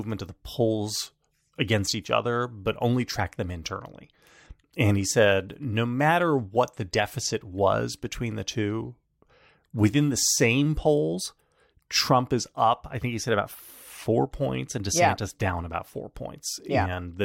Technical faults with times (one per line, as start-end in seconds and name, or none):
none